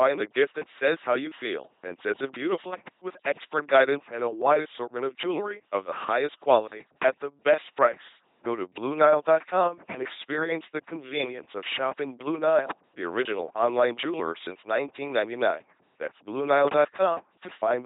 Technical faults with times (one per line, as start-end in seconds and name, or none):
0.00-17.85 LPC-10 vocoder